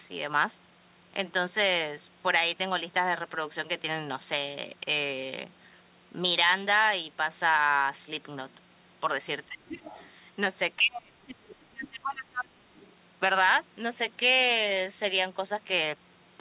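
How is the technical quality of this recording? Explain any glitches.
The recording has two echo-canceller faults clustered between 9.5 and 12.9 s. The band-limited sound, with nothing above 4 kHz, fits a G.711 A-law call path at 64 kbps.

Speech suppressed in double talk, at 9.47–9.83 s, 10.77–11.37 s and 11.57–12.73 s: the speech sinks by about 20, 30 and 25 dB, likely because the canceller muted the talker while the far end spoke.

Other side's voice leaking through, at 9.66–10.09 s, 11.49–11.55 s and 12.79–12.88 s: a faint second voice appears about 20, 25 and 30 dB below the speech. It is likely loudspeaker echo the canceller missed. It is a separate voice, not a reflected copy of the talker as with room reverberation.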